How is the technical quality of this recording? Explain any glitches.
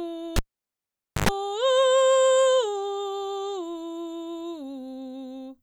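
The music is interrupted once by a cable pulled and plugged in. From 0.36 s to 1.29 s a live lead was disconnected and reinserted: a pop, about 0.88 s of near silence, a roughly 0.1 s burst of 50 Hz mains buzz as the tip made contact, then another pop as the music returned.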